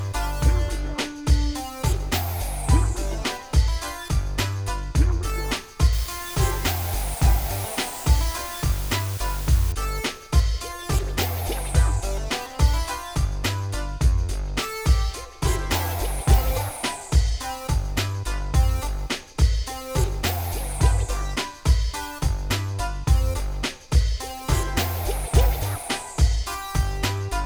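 From about 5.93 to 9.72 s the audio sits under a steady, even hiss, and that's low bit depth with dither. The hiss is loud, sitting not far below the sound itself, which fits a signal squeezed down to roughly 6 bits. Because dither was added before the rounding, the quantisation error turns into flat white noise rather than gritty distortion, so you hear a constant hiss layered over the sound for that stretch.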